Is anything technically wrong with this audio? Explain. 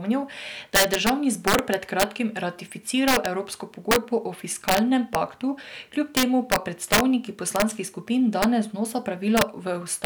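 Yes. Integer overflow runs through the whole speech clip. The signal is driven about 7 dB too hot. Peaks that pass the integer limit wrap around to the opposite sign instead of being held. A small fraction of samples do this. Each one is heard as a violent crack on loud syllables, far harsher than clipping.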